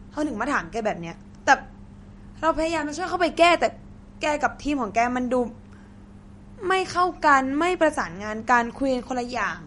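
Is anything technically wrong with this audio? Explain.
Yes. Throughout, the speech sounds watery and swirly, with nothing above 11.2 kHz. This is likely MP3 compression at a bitrate around 47 kbps, which cuts treble and drops weak frequency lines.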